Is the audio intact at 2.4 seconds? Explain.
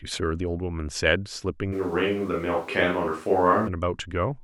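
No, a switch to a distant microphone runs from 1.74 to 3.66 s. The speech abruptly turns roomy, hollow and thin, likely because a faraway microphone replaced the close one.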